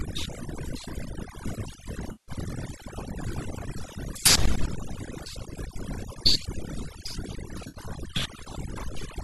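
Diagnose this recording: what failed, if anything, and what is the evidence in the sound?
Overdone noise removal sits in the call-processing stage and runs through the whole recording. The background has been pushed to near silence, but isolated specks twinkle in and out, and quieter components of the speech were cut along with the noise. That pattern is individual frequency bands being gated hard against a noise estimate. It is different from broadband gating, which would pump the whole background up and down together.

AAC frame loss with concealment comes from the network, with the decoder trying to cover the gaps. A smeared, phasey patch runs from 2.12 to 2.32 s, about 160 ms. A shorter one runs from 7.68 to 7.78 s, about 60 ms. Both are rebuilt from the last good spectrum, which points to a run of lost short frames, likely from the low-delay AAC stream. They are not hard dropouts to silence and have none of the clicks of sample-level gaps.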